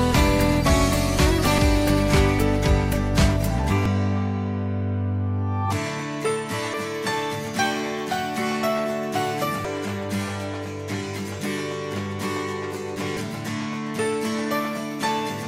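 Five short blips crop up at 1.58, 3.86, 6.74, 9.65 and 13.17 s, each a tiny chirp, squawk, click or short hole lasting only a few milliseconds. They're classic damaged data in a compressed stream: at each of those points a bit of the encoded file got mangled, so the decoder couldn't make sense of that frame, lost its footing, and had to hunt for the next valid header before carrying on. What you hear is that brief stumble.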